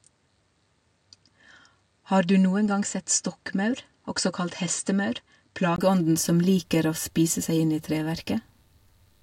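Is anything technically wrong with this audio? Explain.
Yes. From 0 to 5.78 s the speech sounds duller, quieter and faintly hissier, with nothing above 9.2 kHz, and then a brief 20 ms gap. This is likely an input switched to a poorer, narrower-band device.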